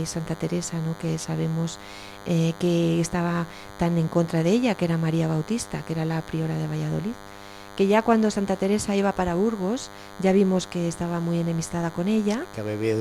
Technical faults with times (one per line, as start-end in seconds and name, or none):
0.00-13.00 DECT cordless phone buzz